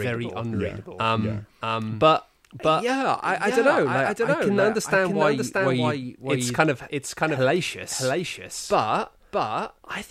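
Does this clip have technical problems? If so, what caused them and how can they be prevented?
Yes. The speech is likely being captured twice, either through a second, slower path or by an edit that keeps two copies out of step, producing a doubled audio track throughout. A full-band copy trails roughly 0.7 s behind, about 5 dB quieter, with no decay or room colour. To prevent it, route the source through a single capture path and remove any duplicate layer when editing.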